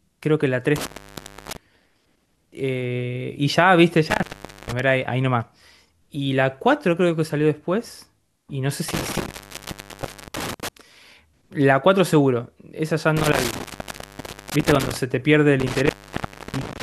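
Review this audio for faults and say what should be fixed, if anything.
Intermittent contact at 0.76–1.57 s, 4.10–4.80 s, 8.88–10.68 s, 13.17–14.97 s and 15.60 s to the end: a loose cable or plug keeps losing its connection, so the speech drops out with crackle at the edges as the contact opens and closes. The open spans last about 0.64 s, 0.45 s, 0.99 s, 0.86 s and 0.65 s, leaving faint hiss. Reseat or replace the suspect cable and connectors and secure them with strain relief so they cannot shift during recording.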